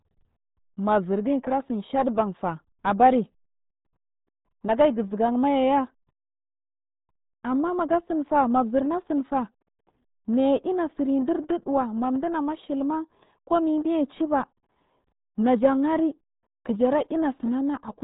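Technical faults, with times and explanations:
Throughout: RealAudio 14.4 codec. The speech is muffled and gargly, with heavy coding damage. Nothing above 3.8 kHz gets through. The smeared sound fits a very low bitrate of about 8 kbit/s, made for dial-up modems. So little data leaves a bubbling, watery texture.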